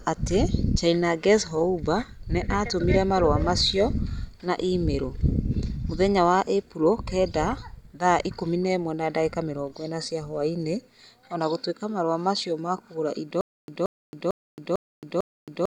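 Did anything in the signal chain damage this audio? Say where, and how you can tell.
Yes: stutter with silent gaps from 13.41 s onward, after "macio ma kũgũra indo". A 178 ms burst repeats five times between 271 ms silences, likely from a stalled playback stream.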